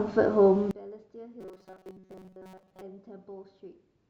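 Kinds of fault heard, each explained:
One channel inverted: one stereo channel likely has reversed polarity, so from 0.71 s the mono sum cancels, leaving the speech about 24 dB quieter.
Robotic sound from repeated short buffers: audio likely arrives too seldom, and repeated chunks of about 5 ms fill the gaps, imposing a rigid, metallic 188 Hz buzz from 1.41 to 2.82 s.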